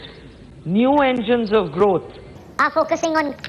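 From 2.36 s to 3.48 s, a wrong sample rate fault appears. The sound suddenly runs 1.45 times too fast and about 6.45 semitones too high. Speed and pitch rise together. This fits audio recorded at 22 kHz being played at 32 kHz without conversion.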